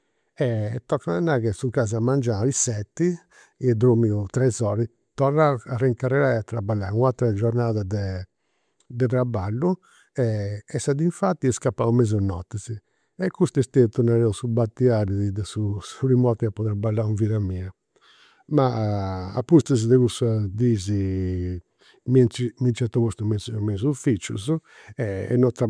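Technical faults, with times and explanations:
No technical faults can be heard in the speech. Nothing in the recording needs a time or an explanation.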